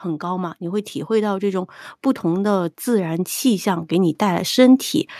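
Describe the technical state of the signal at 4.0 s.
At 4.0 s the automatic gain control is still raising its gain, partway through a rise that runs from 0.05 s to 4.89 s and totals about 9 dB. Having judged the input too quiet, it keeps lifting the level, so the speech and background swell together steadily rather than holding at a fixed loudness.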